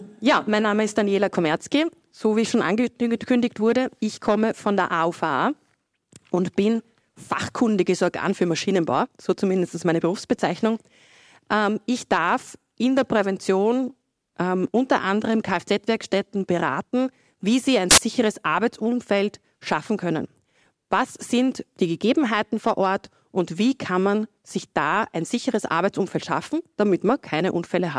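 At 17.91 s the player reads a block of file tags, here the compressed data of an embedded cover picture, as though it were audio samples. This is file tags played as audio. Because compressed image bytes are essentially random, they decode as very loud white noise. The result is a sudden, harsh burst of static lasting about 70 ms, ending at 17.98 s, with hard edges that cut abruptly in and out of the surrounding sound.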